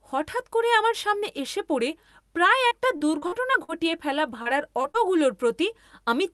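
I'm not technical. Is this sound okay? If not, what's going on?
No, not quite. This speech has two rough patches, from 2.67 to 3.70 s and again from 4.42 to 4.96 s, caused by repeated packet loss (robotic sound). Bits of the call audio went missing in quick succession, each gap under about a twentieth of a second. The call software covers each hole by stretching the last bit of sound it had, so the voice turns choppy, with pieces clipped out.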